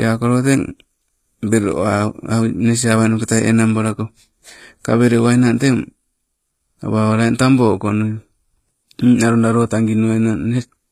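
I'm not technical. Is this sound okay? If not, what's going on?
No. Throughout the speech, the s sounds come out gritty and lispy, most likely from HE-AAC compression rebuilding the treble. It stays bright rather than muffled, but sounds metallic.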